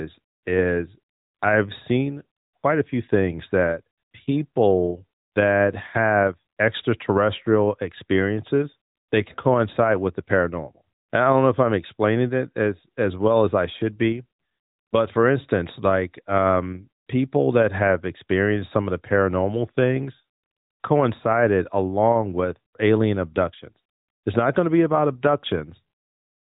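No faults can be heard in the speech, which runs through the AMR narrowband mobile codec as expected, with its band limited to 4 kHz and only the light coding character that fits the 12.2 kbps mode.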